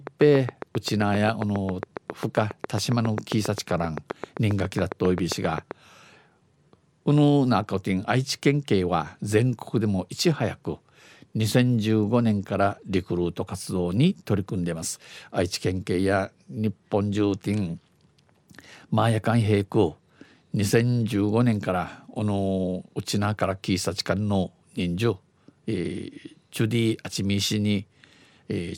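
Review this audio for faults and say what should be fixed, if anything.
Train of clicks, 0.07 to 5.72 s: around forty evenly spaced pulses at 7.45 per second, peaking about 15 dB above the speech, likely from nearby equipment or a faulty connection or power supply. To prevent it, keep the recording chain away from interfering devices and check that the interface has stable power, connections and buffering before recording.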